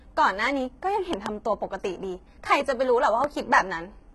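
Throughout the speech, heavy damage points to HE-AAC compression at a rate that likely fits about 16 kbps. The treble is rebuilt from copied lower bands, so s sounds turn gritty and metallic. A spectrogram shows repeated, blocky bands above the crossover and nothing above 11.8 kHz.

From 1.13 s to 1.28 s a loud pop, two sharp clicks, lands on the speech, likely from a voltage spike such as static. The waveform shows two narrow spikes some 15 dB above the signal, and the spectrogram shows two full-height vertical lines.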